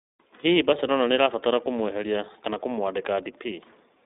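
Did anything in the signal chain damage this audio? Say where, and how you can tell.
Yes, at the codec stage, and it runs the whole clip. This is iLBC: the band is clamped to roughly 200 Hz to 3.7 kHz, with nothing at all above 3.8 kHz, so the speech sounds boxed-in. The plainly audible damage is a slightly rough, synthetic buzz, because each short frame's excitation is coded on its own without leaning on the previous one. The graininess fits 20 ms frames at about 15 kbps.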